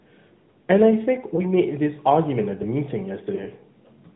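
Throughout, the sound carries AMR narrowband mobile codec damage: a buzzy, synthetic quality from the pulse-driven vocal tract model, with nothing above 4 kHz. The coarseness points to a mid-range mode of about 10 kbps. A spectrogram shows a hard ceiling at 4 kHz and smeared harmonics.

From 1.36 to 1.42 s comes the first instance of lost AMR speech frames. The decoder repeats its last pitch and vocal tract settings at reduced gain, giving a brief dip with a warble. This fits one missing 20 ms frame. The waveform shows a short amplitude sag, and the spectrogram shows a frozen, repeated harmonic pattern.

From 3.36 to 3.46 s the same concealment recurs, again consistent with a single lost frame. It is heard as a short warbling dip, with a weak, rough recovery as the decoder's state settles.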